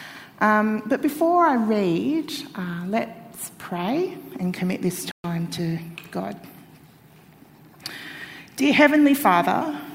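At 5.11 s the audio drops out for about 0.13 s, and when it returns at 5.25 s it has skipped ahead by roughly 70 ms. This is a stream reconnect: the connection broke, the player restarted its decoder mid-stream, and playback resumed at a later point.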